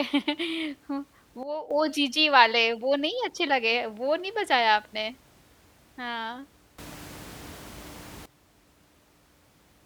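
A speech clip with a sudden gain jump twice: the level drops by about 11 dB from 1.43 to 1.71 s, then rises by about 18 dB from 6.78 to 8.26 s, voice and background noise together. It is likely an unramped digital gain change. The waveform envelope and spectrogram brightness step abruptly at each boundary.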